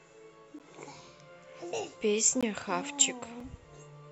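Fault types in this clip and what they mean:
Block of digital silence: the audio path likely failed to deliver samples in time, and the output was filled with zeros instead, cutting the speech abruptly to dead silence and back with no fade. This happens three times, at 0.59 s, 2.41 s and 3.40 s, with gaps of 11.6 ms, 17.4 ms and 4.5 ms. The first fits a 512-sample buffer. The hard edges make each dropout a sharp tick or brief hole.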